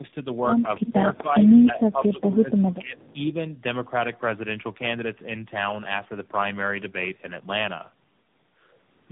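Tandem speech coding runs through the whole clip. The speech is rough, muffled and warbly, with nothing above 3.8 kHz. That fits three speech codecs in a row, ending in AMR-NB. Each re-coded the previous one's damaged output, so errors stacked.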